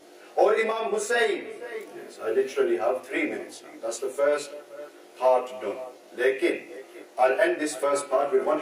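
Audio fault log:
throughout, channel delay (comb filtering): one channel lags the other by around 20 ms, and in the mono sum the shared content cancels at evenly spaced frequencies from around 30 Hz upward, giving a rough, slightly doubled sound. A spectrogram shows fixed horizontal notch stripes across the whole clip.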